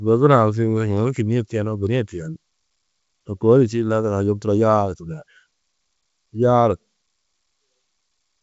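Nothing faulty can be heard anywhere in this speech.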